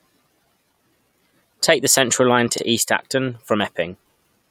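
Repeated frames occur at 2.57–2.61 s and 4.13–4.15 s. A short block of compressed speech, about 43 ms and then about 21 ms, which suggests two frames and one, is decoded twice. Each replay is a brief stutter that lengthens the audio by the repeated time.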